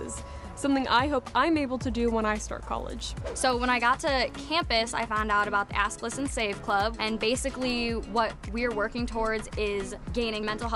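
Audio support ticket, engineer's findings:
Regular ticking, 10 per second, 2.30–7.90 s, riding on the signal. Resampler restarted on every block: 24 kHz to 48 kHz conversion run per 100 ms block, no carried-over history, so each block edge gets a small discontinuity.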